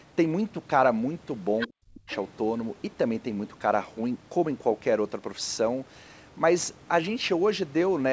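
A speech recording carried over a wideband call path, with the lowest bass trimmed by the call's microphone processing and nothing above 8 kHz. At 1.59 to 1.68 s, a second voice from the other side slips in, sitting only about 10 dB under the talker. It returns from 2.09 to 2.16 s, weaker at roughly 20 dB down. This is other side's voice leaking through: the far end played from a loudspeaker was picked up by the microphone, likely because the echo canceller left a residue it failed to remove. Between those two scraps, from 1.67 to 2.1 s, the talker's own voice sinks sharply, dropping by around 40 dB at its deepest and staying impaired for almost half a second. That is speech suppressed in double talk. Both sides were speaking at once, and the echo canceller likely could not separate the near talker from the loudspeaker echo, so it pulled everything down together.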